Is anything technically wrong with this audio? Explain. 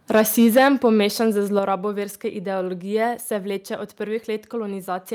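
Yes, there are two related problems. From 0.16 to 1.0 s there is microphone overload: the speech peaks are flattened, giving a harsh, crackling edge. The likely cause is input gain set about 8 dB too high, so a few percent of samples hit the converter's ceiling.

There are two microphone volume steps down, at 0.58 s and at 1.59 s, just before "verske ideologije se". Speech and background drop abruptly, by about 4 dB and then about 6 dB, likely from call software reducing device input gain in response to the clipping.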